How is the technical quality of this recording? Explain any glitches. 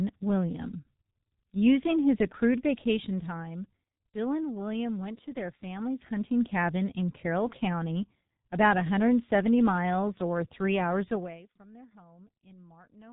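The quality is poor, with one fault running through the whole clip. The speech passed through the G.723.1 codec at a very low rate, consistent with about 6 kbit/s, so nothing above 3.8 kHz survives. The voice sounds muffled and hoarse, and the consonants are smeared.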